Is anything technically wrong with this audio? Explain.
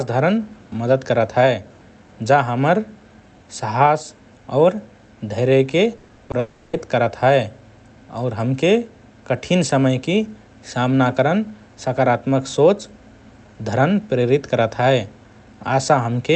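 Yes, the speech has two connected network faults, heard through an Opus call path whose content stops near 8 kHz.

From 5.97 to 6.35 s, repeated packet loss (robotic sound): five gaps, the longest 60 ms, are patched by repeating earlier sound, giving choppy speech and smeared, repeated spectrogram slices.

From 6.39 to 6.75 s, a long network dropout is the likely cause of 340 ms of continued buzz or hiss that fades, with flat harmonic bands but no silent gap.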